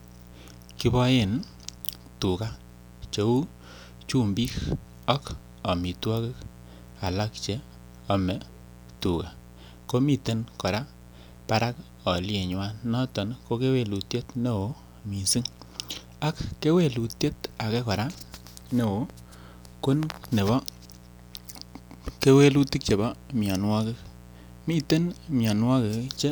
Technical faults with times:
0.00-26.31 mains buzz

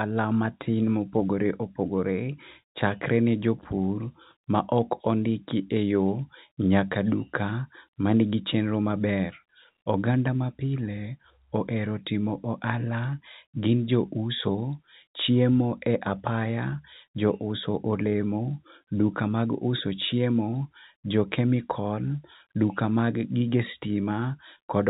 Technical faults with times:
none

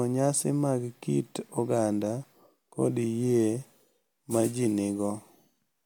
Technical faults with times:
none

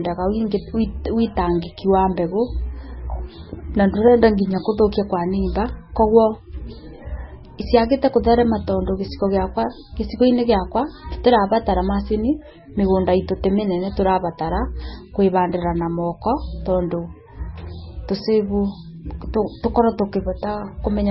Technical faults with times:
0.00-21.11 MP3 compression

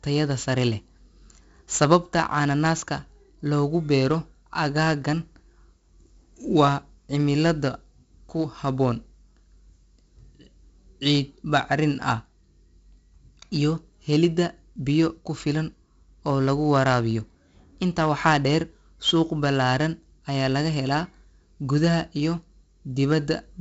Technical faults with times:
0.00-23.61 4-bit ADPCM compression

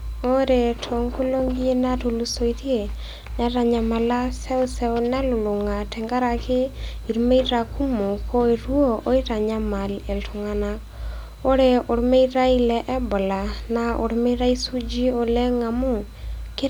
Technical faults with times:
none

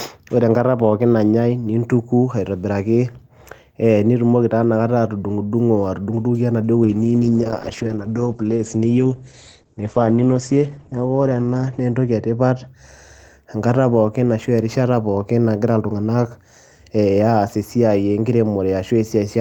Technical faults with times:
6.84-12.73 call bitrate drop

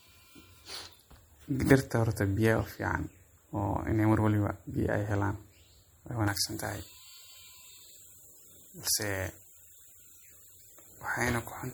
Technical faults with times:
0.00-11.74 MP3 compression
6.28-11.74 pre-emphasis left on

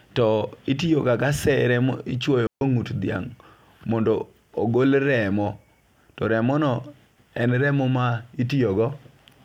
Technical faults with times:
2.47-2.61 digital wireless dropout

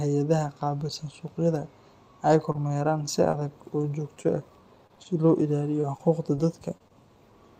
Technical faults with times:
2.52-6.92 scattered short gaps

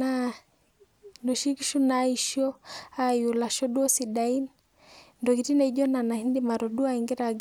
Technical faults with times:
none

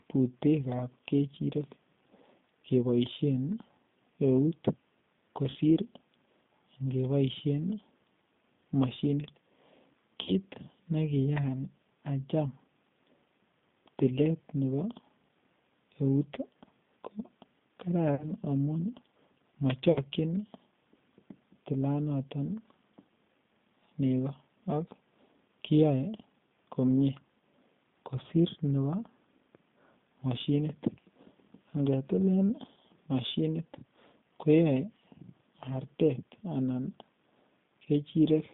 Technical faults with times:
0.00-38.54 G.729 codec
5.50-5.57 VoIP packet loss concealed by the speech codec
10.23-10.31 VoIP packet loss concealed by the speech codec
18.15-18.25 VoIP packet loss concealed by the speech codec
19.92-19.99 VoIP packet loss concealed by the speech codec

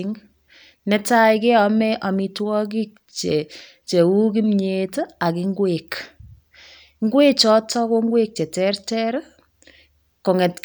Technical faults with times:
none

